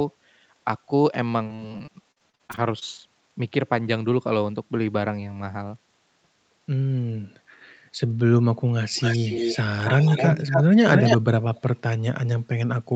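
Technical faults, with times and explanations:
1.43–2.84 s: repeated packet loss (robotic sound). The sound breaks up into 14 short gaps, the longest 47 ms. Each hole is bridged by stretching the preceding sound, so about a quarter of this stretch is patched. It turns choppy and robotic.
8.95–9.57 s, 9.84–10.64 s, 10.91–11.18 s and 11.55–11.61 s: echo leak. A copy of the sound returns 270 ms late. It comes in slightly quieter than the original, then about as loud at 10.91 s, then very faint at 11.55 s. Likely a loudspeaker's output leaking past an incomplete echo canceller.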